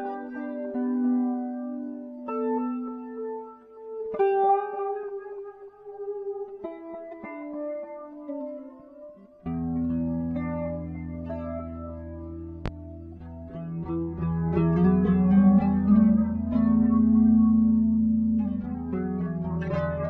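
At 12.66 to 12.69 s there is a single loud pop. It is a sharp, brief thump, roughly 10 dB above the everyday sound, which carries on underneath. The likely cause is a sudden voltage pulse, such as a switch, plug or static discharge.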